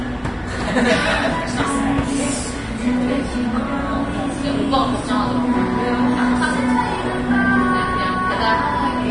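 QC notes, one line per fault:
Throughout: Vorbis compression, likely at a low bitrate somewhere near 30 kbps. Nothing comes through above 10.6 kHz, and the remaining treble is hissy and grainy, with roughened tones and smeared attacks, because fine detail is being swapped for coarse noise.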